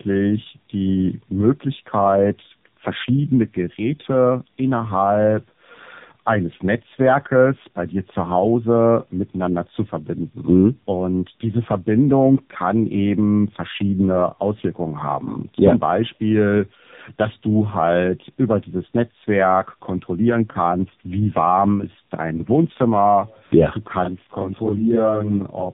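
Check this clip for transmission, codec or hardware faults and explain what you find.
One fault runs through the whole clip: tandem speech coding. The speech sounds rough, muffled and warbly from start to finish, with added noise, and nothing is audible above 3.7 kHz. The sound points to two AMR-NB stages in a row, at rates that fit 7.95 and 7.4 kbit/s, with a G.711 A-law link between them. At each border the call is decoded and coded again, so the second model-based coder works on speech the first has already degraded, and their errors add up.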